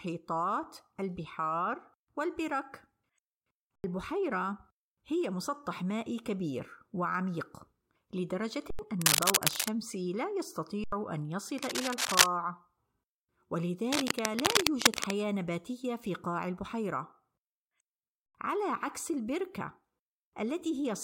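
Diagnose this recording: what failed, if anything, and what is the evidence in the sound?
The driver or buffer stage failed four times with an underrun with held sample. At 3.76, 8.70, 10.84 and 18.26 s the speech stops dead for about 85 ms. The waveform goes flat at a held level, so the stop makes almost no click. That length fits a 4096-sample buffer running dry. Roughly a tenth of a second of live speech is lost each time.

The analogue wiring is the likely cause of the cable scratch noise. Dense, uneven bursts of scratching and rustling sit over the speech from 9.01 to 9.68 s, 11.58 to 12.26 s, and 13.88 to 15.23 s. They run about 5 dB above the speech. This points to a worn cable, connector or control being moved, with its contact resistance changing rapidly. Each burst lasts under a second except the last, which runs well over one.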